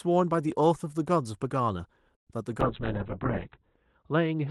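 A call audio freeze runs from 2.15 to 2.28 s. The speech stops and the line drops into near-silence for about 110 ms before resuming exactly where it left off, so nothing is lost but everything after it arrives 112 ms late. This is the typical trace of a stall on the network: the likely cause is packets held up in transit, leaving the jitter buffer empty while the receiver waited.

A call bitrate drop begins at 2.61 s and lasts to the end of the clip. The Opus stream, running at 32 kbps with audio reaching up to 12 kHz before this point, is pushed down to 7 kbps and stays at that floor for about 1.1 s. With so few bits the encoder cuts the band to 4 kHz and codes far more coarsely, so the speech turns muffled and rough, with a watery, smeared texture.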